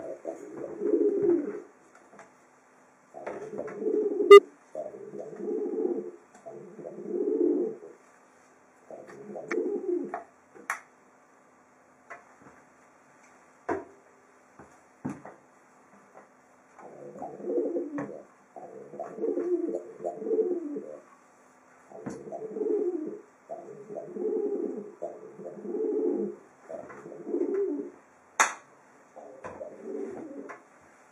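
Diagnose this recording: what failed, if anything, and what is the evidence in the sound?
Compressed frames skipped at 4.28, 9.48 and 19.18 s. At the codec stage, each jump drops about a tenth of a second.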